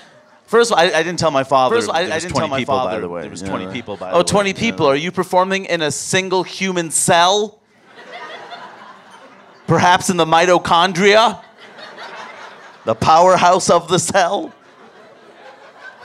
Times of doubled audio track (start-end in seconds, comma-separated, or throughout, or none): 1.69-4.95